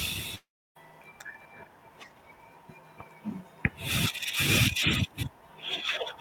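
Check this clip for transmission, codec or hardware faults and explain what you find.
One transmission fault is present in the speech, a single long network dropout.

From 0.35 to 0.77 s, about 400 ms of audio is missing, likely because packets never arrived. The last sound stretches into a fading continuation, then goes silent before speech resumes. On a spectrogram this shows as smeared horizontal bands thinning into a blank gap, and the waveform is nearly flat for about 300 ms.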